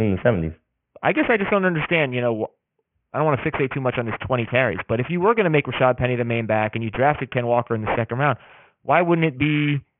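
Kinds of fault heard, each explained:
Aliasing: the speech was downsampled without filtering, consistent with a 6 kHz rate, so content above 3 kHz folds back as fairly loud, gritty, wrong-pitched junk throughout.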